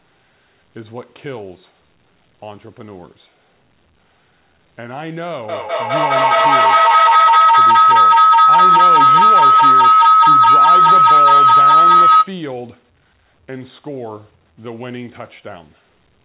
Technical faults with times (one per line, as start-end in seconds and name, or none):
5.49-12.41 feedback howl